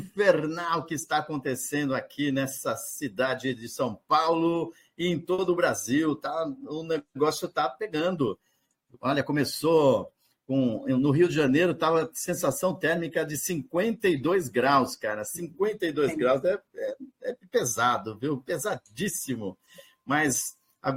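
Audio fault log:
5.33 to 5.40 s: short stall from a late packet. A packet arrived late, the jitter buffer ran dry, and the receiver held the last sound for about 50 ms before carrying on from the same point. Nothing is lost, unlike a dropout, so the sound simply lingers with a faint buzz or dip.
10.60 to 11.07 s: jitter buffer speed-up. With too much audio queued, the receiver trimmed short pitch-period pieces again and again, removing about 50 ms in all. The sound runs at about 109 percent speed with pitch unchanged, which separates it from a resampling speed error.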